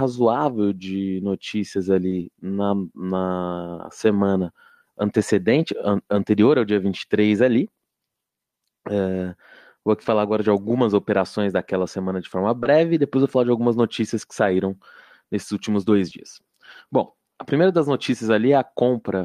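At 2.09 to 2.13 s, right after "de notícias", a short concealed packet loss occurs. About 20 ms of audio never arrived, and the decoder bridged it by extending the preceding sound before cross-fading back, leaving a brief smear. The same happens at 12.63 to 12.67 s after "daquela semana de forma", and at 16.09 to 16.13 s after "saíram nesses últimos dois". Each is heard as a brief smear or wobble in the speech.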